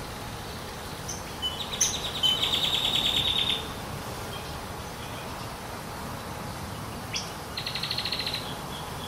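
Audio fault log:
0.00 to 3.20 s, crude rate conversion: the audio was resampled, which fits a change from 44.1 kHz to 48 kHz, by picking the nearest sample with no filter, so samples are repeated in a regular pattern. The error sits roughly 15 dB below the signal and comes across as a gritty, inharmonic fizz following loud and high sounds.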